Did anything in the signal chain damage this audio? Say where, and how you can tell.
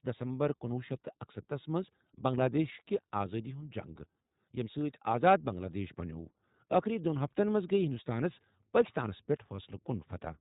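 Yes. Throughout, the speech sounds narrow, roughened and faintly synthetic, with nothing above 3.8 kHz. That points to the iLBC codec at around 15 kbps, coding each 20 ms frame independently.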